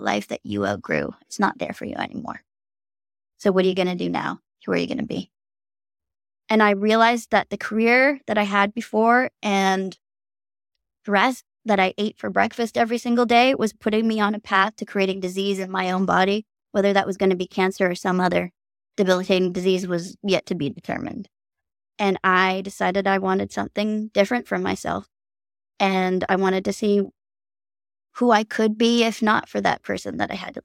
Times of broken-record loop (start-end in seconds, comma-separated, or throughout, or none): none